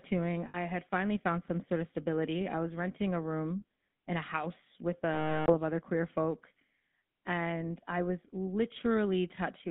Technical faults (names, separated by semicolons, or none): GSM full-rate codec; lost GSM frames